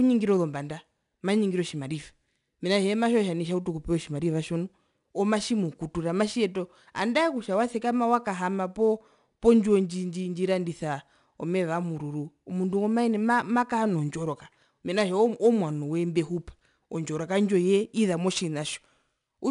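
4-bit ADPCM compression runs throughout the speech, plainly audible as gritty hiss riding loud syllables. Nothing sounds above 10.6 kHz, which fits a reduced sample rate.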